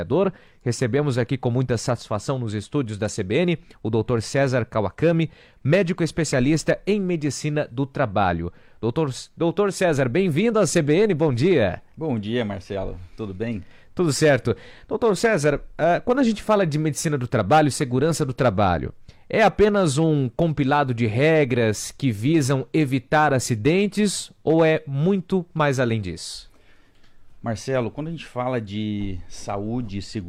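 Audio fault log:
No faults heard in this clip.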